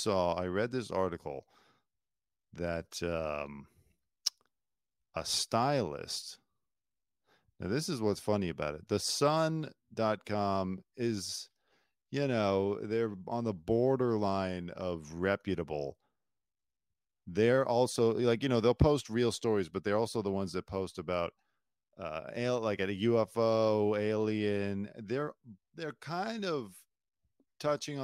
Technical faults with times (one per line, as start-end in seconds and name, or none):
0.00-28.03 sample clock jitter